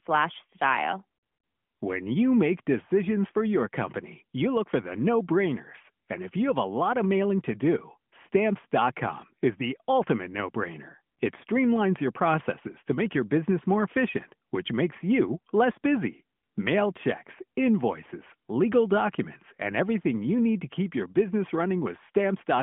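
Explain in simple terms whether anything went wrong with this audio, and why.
Nothing went wrong that a listener would notice: the speech has the narrow, telephone-like sound of a mobile call, but nothing stood out as a problem anywhere in the recording.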